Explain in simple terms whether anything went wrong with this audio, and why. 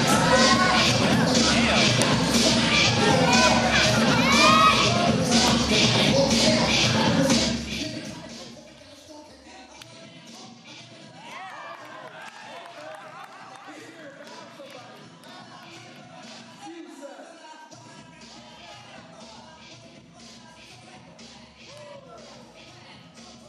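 Between 7.33 and 8.66 s the volume falls in small jumps, about fifteen a second, instead of gliding smoothly. Each jump clicks, which is zipper noise: an evenly paced ticking heard only while the level moves, unlike random crackle.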